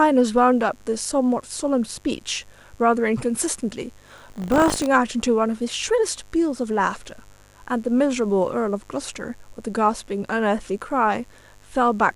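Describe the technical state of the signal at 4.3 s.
Buffer tearing runs from 4.06 to 4.88 s: writer and reader cross each 20 ms period, splicing in a small slice of audio about 70 ms old, heard as a rattling 50 Hz buzz over the speech.

Mains buzz at 50 Hz also sits underneath throughout, around 35 dB below the speech, as switching spikes twice per cycle produce a steady, raspy harmonic buzz.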